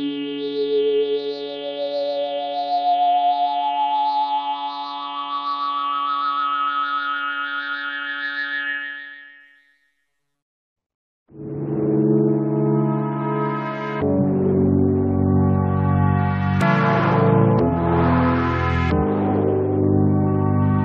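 Nothing in the sound stood out as a technical fault on listening.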